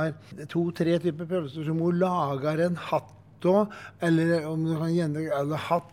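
No technical faults can be heard anywhere in the recording. The audio runs steadily from its opening to its close without any break, dropout or sudden change in level.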